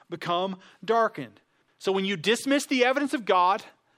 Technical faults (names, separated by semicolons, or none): chunks out of order